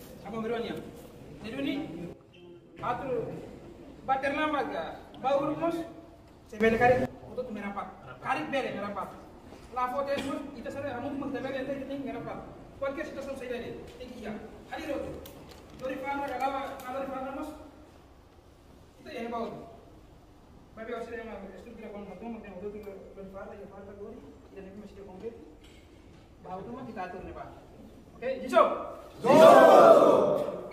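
The audio has two sudden gain jumps, where the level switches abruptly with no fade. From 2.13 to 2.79 s everything drops by about 13 dB, and from 6.61 to 7.05 s it rises by about 14 dB. The background noise moves with the sound each time, and the level snaps back at the end of each stretch. The likely cause is a digital gain setting applied instantly rather than ramped in.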